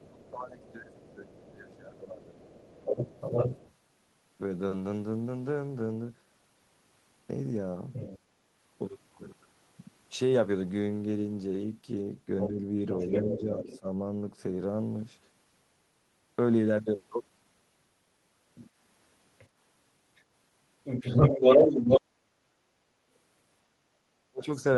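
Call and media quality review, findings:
Other side's voice leaking through: second voice audible at 0.0–3.74 s (level roughly matching the talker), 7.93–8.19 s and 12.4–13.79 s (quieter), 18.55–22.01 s (louder than the talker). Likely incomplete echo cancellation re-sending loudspeaker output. Unlike crosstalk, it is the far end returned.

Speech suppressed in double talk: talker level dips while both sides speak, at 0.12–2.34 s (deep dip), 12.47–13.86 s (slight) and 23.92–24.46 s (near-total cutout). Likely echo canceller attenuating everything when it cannot separate near talker from echo. Unlike packet loss, dips track overlap.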